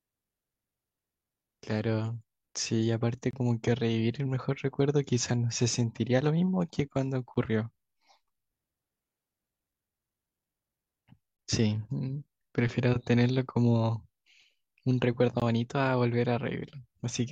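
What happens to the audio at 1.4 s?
Nothing goes wrong at 1.4 s; the speech carries on intact through that moment, with no dropout, click, distortion or other fault to be heard.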